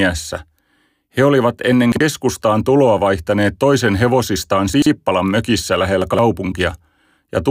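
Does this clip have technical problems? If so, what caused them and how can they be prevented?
Yes: chunks out of order, at 1.92 to 2.01 s just after "olivat ennen", 4.74 to 4.86 s after "tuloa vaihtaneet toisen hevosistaan", and 6.02 to 6.19 s. Each time, a chunk of about 43 ms plays one, two, then three chunks too late. This jumbles the speech. Unlike a dropout, nothing is missing, only reordered. Numbering chunks in sequence and reordering them in a buffer before playback prevents it.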